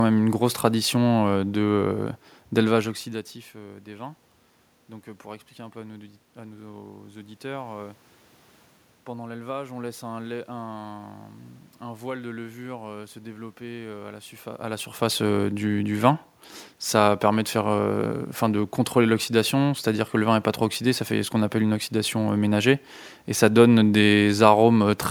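There are no technical faults in this clip to describe in time order.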